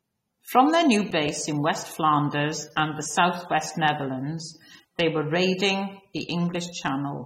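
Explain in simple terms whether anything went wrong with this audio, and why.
The whole clip has AAC compression damage, likely from heavy data squeezing. The speech sounds dull, smeared and fizzy, with nothing above about 16 kHz.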